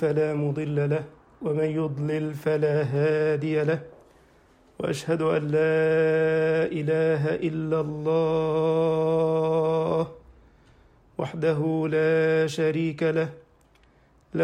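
Throughout, a resampler restarted on every block leaves a 50 Hz buzz. Each 20 ms block was converted separately, so every edge carries a small error. Unlike mains hum, the buzz stops when the sound stops. The pattern fits conversion from 44.1 kHz to 48 kHz.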